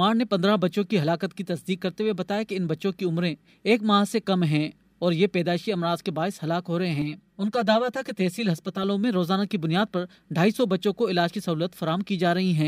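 From 7.02 to 8.83 s the sound turns hollow and phasey: channel delay (comb filtering), one channel lagging about 5 ms, carving evenly spaced notches from around 100 Hz.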